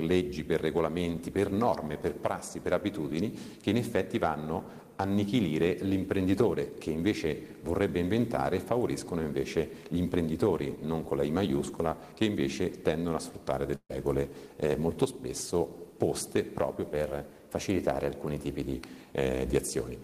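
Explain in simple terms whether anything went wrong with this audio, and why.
Two things go wrong. At 13.75 to 13.91 s there is a burst of packet loss. About 140 ms of audio never arrived, so the player stretched out the last sound as a fading buzz or hiss, with a brief silence, then jumped ahead. Unlike an ordinary dropout, it doesn't go fully quiet at once.

From 16.92 to 18.73 s everything plays about 6% faster and roughly a semitone higher, then snaps back. This is likely a drift correction step, where clock-matching software briefly changed the playback rate. Unlike a steady speed error, it starts and ends abruptly.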